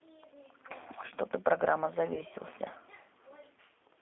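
Throughout, the speech passes through the G.729 codec at 8 kbit/s, which models each 10 ms frame with a vocal tract filter, a pitch predictor and a few pulses. The line band runs from about 250 Hz to 3.5 kHz, and the coding damage is plainly audible as a rough, slightly synthetic texture.

From 2.14 to 2.23 s, packets go missing and the speech codec conceals the loss, which fits about 30 ms of lost audio. The decoder extends the previous pitch and filter at falling gain, so the voice smears into a fading buzzy tone or coloured noise before recovering.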